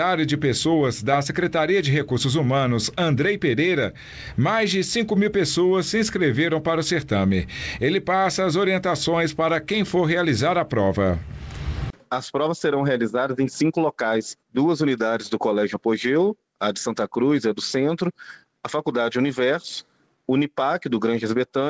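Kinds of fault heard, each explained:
No faults can be heard; the audio arrives intact over a call link whose content stops at 8 kHz, which fits a wideband codec such as G.722.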